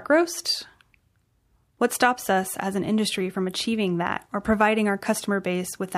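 Nothing in this speech clip stands out as a technical fault, so there's nothing here to flag.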